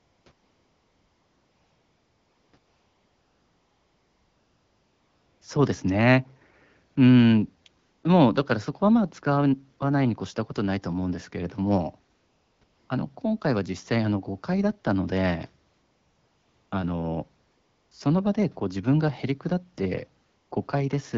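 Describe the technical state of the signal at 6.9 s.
At 6.91 to 6.95 s there is a 40 ms stretch of AMR comfort noise: the sending phone treated the moment as silence and stopped transmitting speech frames, so the receiver substituted synthetic noise built from a rough level-and-spectrum estimate. It sounds like a brief, smooth hiss replacing the real background. On a spectrogram it shows as a flat, texture-free band, and on the waveform as a steady low-level fill, set within wideband speech whose clarity points to AMR-WB at around 12.65 kbit/s.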